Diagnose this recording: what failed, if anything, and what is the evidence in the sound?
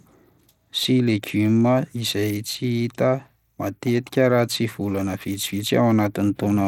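The codec stage failed: the damage points to Bluetooth SBC compression, likely running a small bit pool, which fits a rate of about 96 kbps. Throughout the speech, a gritty, grainy noise rides on the sound and the treble flickers rather than staying steady, though some content still reaches about 19.8 kHz. SBC splits the signal into a few wide sub-bands and shares a tight bit budget with no hearing model. The weak top bands starve and the rest are coarsely quantised, which creates the grit and aliasing heard here.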